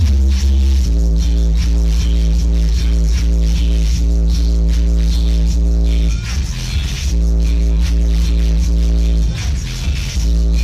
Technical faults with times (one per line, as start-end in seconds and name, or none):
1.47-9.45 clock drift buffer slips